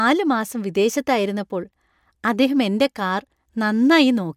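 No technical faults are audible in the recording, and the signal holds steady throughout with nothing going wrong at any point.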